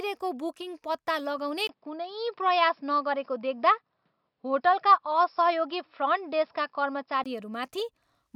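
The input likely switched to a poorer device at 1.67 s, after a 20 ms gap, and back at 7.26 s. In between, the speech loses everything above 5.4 kHz, sounding dull, shifts about 5 dB in level, and gains background noise about 55 dB down.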